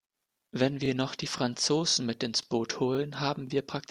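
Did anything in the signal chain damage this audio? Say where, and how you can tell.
Yes, at the buffer stage: overlapping chunks. A stutter recurs at 0.33–0.36, 0.86–0.88 (before "noch die"), 1.38–1.40, 1.90–1.93 (before "mit ins"), 2.43–2.45 (after "mit ins"), 2.95–2.97 and 3.47–3.50 s. Each 0.5 s chunk starts 23 ms early, replaying that slice.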